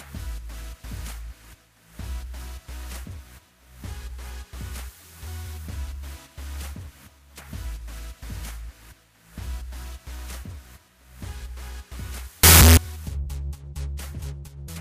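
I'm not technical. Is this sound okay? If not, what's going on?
No. From about 12.43 to 12.77 s the sound turns into a loud, harsh roar for roughly a third of a second. This is most likely a signed and unsigned mix-up: the 16-bit sample values were read with the wrong sign convention, so every point where the waveform passes through silence becomes a jump from one extreme to the other. Ordinary clipping only roughens the loudest moments. Here even quiet parts blast out just as loud.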